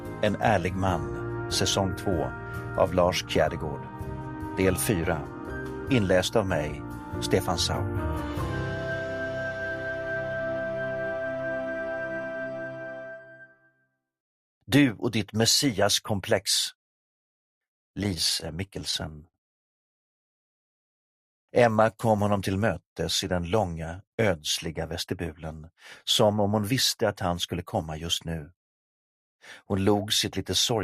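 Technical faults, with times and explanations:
18.03–19.36 s, repeated stalls (stutter): the sound catches and drags twelve times in just over a second, each hitch briefly holding the previous sound before moving on, with the longest hold around 62 ms. Packets were arriving late, so the jitter buffer kept running dry, and the receiver bridged each gap by extending what it last had. Nothing is lost, but about 185 ms of filler, roughly 14% of that stretch, makes it lurch.
27.56–27.85 s, jitter buffer speed-up: for under a third of a second the audio rushes forward at about 111% of normal speed while the pitch stays put, giving a brief hurried feel. Too much audio had built up in the jitter buffer, as happens when late packets turn up in a bunch. To bring the delay back down, the receiver cut out tiny pitch-period slices in quick succession, trimming around 40 ms in total.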